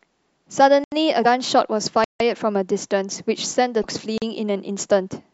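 At 0.84 s the speech drops into a block of digital silence for 80 ms. Samples were replaced by zeros, likely because the output buffer was not filled in time. The sound cuts out and back with no fade. At 1.22 to 1.26 s, damaged data in the compressed stream makes the decoder lose sync and search for the next frame header. A longer silent block, 160 ms, opens at 2.04 s and leaves a short hole. A second burst of corrupt stream data occurs at 3.80 to 3.85 s. At 4.18 s comes a 40 ms silent block.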